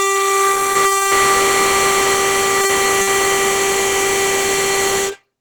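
Across the whole music clip, the likely cause is Opus compression at a starved rate near 16 kbps, pushing the encoder into its hybrid speech-style mode. Plainly audible damage results: tones turn muffled, hoarse and grainy, though content still extends to about 20.6 kHz.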